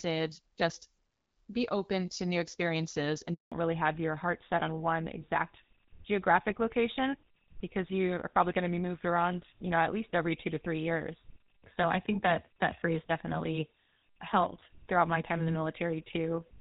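Right after "open to new experiences" there's a handover gap from 3.34 to 3.52 s: the speech cuts out for 180 ms while the call switches networks. From 3.52 s to the end comes a fallback to narrowband. The clear HD Voice sound gives way to a duller, rougher tone with nothing above 4 kHz, which fits a move to GSM full rate.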